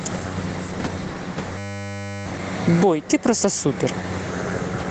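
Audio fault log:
throughout: gain pumping. Gain ducks by about 15 dB under loud syllables, likely from excessive mic gain hitting a fast limiter, unlike steady level compression.
1.58–2.26 s: system hang loop. A 10 ms fragment repeats exactly, producing a steady 100 Hz buzz rather than a stutter. The identical repetition distinguishes it from dropout or packet-loss concealment.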